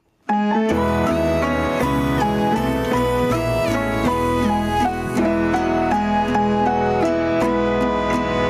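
Gain pumping runs through the whole clip, with the level swinging by roughly 10 dB. The likely cause is input gain set far too high, with a fast limiter or compressor clamping down on each peak, which leaves the sound squashed and loud and soft passages close in level. A noise gate would do the opposite, cutting the background in the gaps rather than letting it swell.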